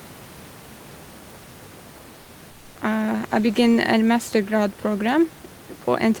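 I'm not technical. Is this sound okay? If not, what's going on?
No. Between 2.21 and 2.29 s, and again from 2.51 to 2.75 s, the room's natural background turns into a flat, slightly quieter hiss. This is comfort noise in place of the background, likely because the sender paused transmission between speech. Unlike a dropout, it never goes silent.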